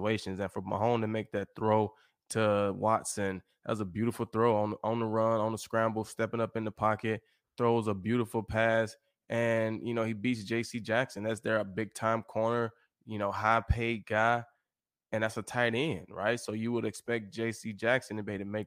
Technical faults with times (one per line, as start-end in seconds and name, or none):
none